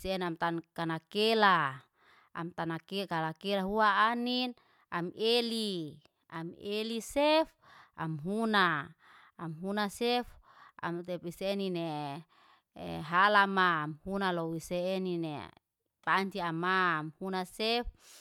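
Nothing goes wrong anywhere in this bit of speech, so there's no technical fault to point to at any moment.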